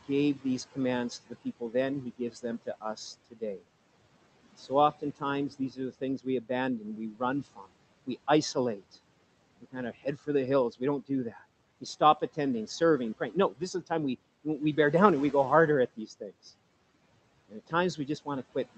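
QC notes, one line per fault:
0.08–3.63 s, 4.58–8.97 s, 9.61–13.91 s and 17.5–18.8 s, speech cut by the noise suppressor: the suppressor mistakes stretches of speech for noise and pulls them down with the background by up to about 14–17 dB, leaving soft consonants and word endings swallowed or faint, roughly 0.4, 0.7 and 0.5 s of affected speech in the first three runs. On a spectrogram, speech energy gaps or fades into the floor, with the room noise about 20 dB below speech. The waveform shows sudden dips.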